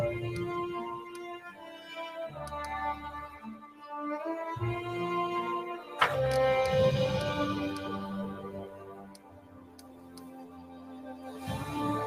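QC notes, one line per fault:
Throughout: noise suppressor applied to music or sounds, steady parts and tails pump and thin by around 15 dB, as speech-tuned suppression treats sustained sound as noise.
0.99–1.92 s, 3.56–3.87 s, 8.68–11.49 s: sound cut by the noise suppressor, sustained sound sinks, deepest about 8, 11 and 12 dB, decays cut short while sharp onsets survive.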